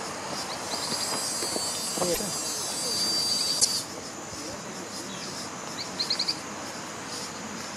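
At 2.13 s the sound jumps ahead and a brief glitch follows, lasting until 2.19 s. The same happens from 3.59 to 3.66 s. Each glitch is a chirp, burst of noise or short hole spanning two or three frames, which fits 26 ms MP3 frames. The likely cause is a broken MP3 bit reservoir. Frames were dropped, so the next frames reached back for borrowed data and decoded bytes from the wrong frame.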